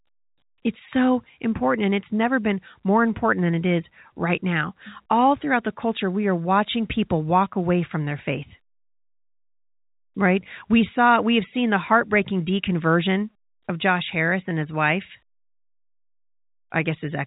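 No technical faults are present.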